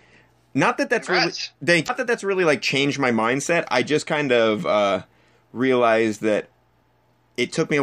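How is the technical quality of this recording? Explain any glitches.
The recording has one audible glitch, a brief corruption in the compressed speech stream. Damaged data in a compressed stream occurs from 1.84 to 1.90 s, just before "that that's really like". For about 56 ms, some of the encoded bytes arriving at the decoder were wrong. The decoder could not interpret those frames correctly, lost its place in the stream, and had to hunt for the next valid frame header before it could resume normal output. The result is a short glitch cutting into the speech.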